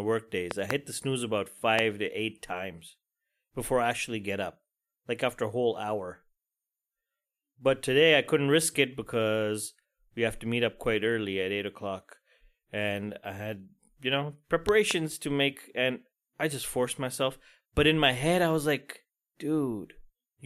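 Loud pops, likely voltage transients from a plug, switch or driver glitch, sit roughly 15–20 dB above the speech. They fall at 0.51–0.73 s as a double pop before "the snooze about", at 1.79 s as a single pop just after "the snooze about", and at 14.69–14.93 s as a double pop between "I had you know" and "to make and I".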